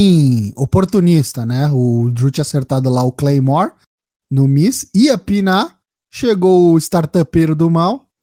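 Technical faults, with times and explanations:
No technical faults can be heard in this speech recording. There is nothing to mark with a time or explain.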